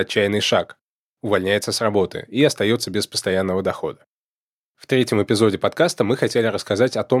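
Nothing stood out on listening to the speech in this clip.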